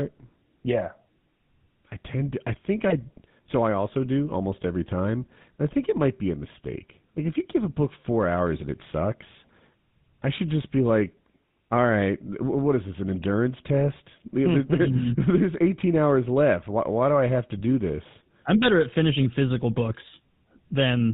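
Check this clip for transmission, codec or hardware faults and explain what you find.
Two faults are audible: a coding artefact that runs through the whole clip, and two short bursts of corruption.

Throughout, the speech sounds buzzy and gravelly, with nothing above 4 kHz. This is the GSM full-rate codec, which fits 13 kbps. It rebuilds the voice from a vocal-tract filter driven by a coarse pulse excitation.

At 2.90 to 2.98 s, just after "tend to I think", and at 5.22 to 5.27 s, just after "also do almost every", the speech briefly squawks and gargles. These are GSM bit errors: flipped bits corrupt the decoder's filter, pitch or gain values for a few frames.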